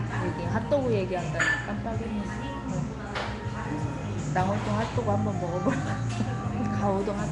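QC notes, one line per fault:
Throughout, Nellymoser compression: the sound carries a rough, hissy halo and a smeared, underwater blur, and nothing is present above 10.6 kHz. This is likely Nellymoser Asao coding, whose fixed low bit budget per block starves weaker bands, which are then filled with noise instead of real detail, a cost that fits a rate near 44 kbps. On a spectrogram the energy stops flat at 10.6 kHz, with speckled noise-filled patches between stronger bands and a blocky, time-smeared texture.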